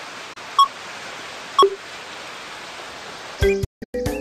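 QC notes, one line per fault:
0.33 to 0.37 s, digital broadcast dropout: a brief 24 ms hole with an 8 ms fade. The receiver muted on a corrupt frame, which fits a single lost frame.
3.64 to 3.95 s, digital broadcast dropout: the sound breaks into several short holes over 288 ms, muting 264 ms in all with the longest gap 168 ms. The receiver kept muting on bad frames, which points to about eleven lost, and the material sent meanwhile is gone.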